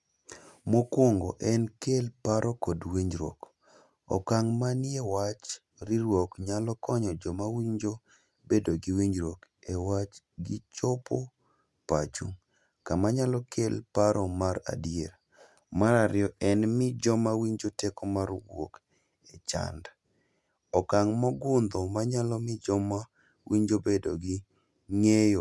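No audible technical faults anywhere in the recording.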